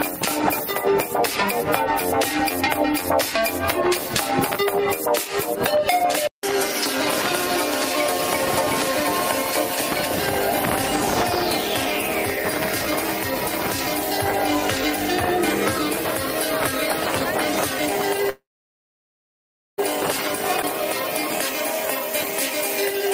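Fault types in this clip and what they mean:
Call audio freeze: From 18.29 to 19.80 s the sound stops and is held for about 1.5 s. A brief continuation of the last sound gives way to roughly 1.4 s of silence, and then audio resumes where it left off. This is likely a delayed packet run draining the jitter buffer.
Skip ahead: At 20.62 to 20.65 s playback jumps forward with almost no gap, dropping around 0.7 s of audio and splicing the two sides together. This cuts back much of the latency built up by the freeze just before.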